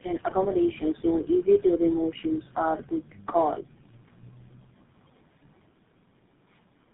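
Speech here, and it's been through tandem speech coding for the whole run: three low-rate speech coders back to back, with each one re-encoding the last one's damage. The roughness, the muffled quality and the watery warble all stack up, and nothing gets through above about 3.8 kHz. The sound fits an AMR-NB leg at 6.7 kbit/s followed by two GSM full-rate hops, linked through 64 kbit/s mu-law trunks.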